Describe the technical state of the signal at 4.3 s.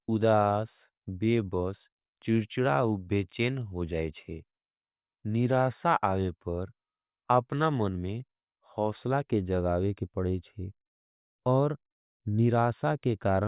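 At 4.3 s the signal is intact, with no fault present at that moment.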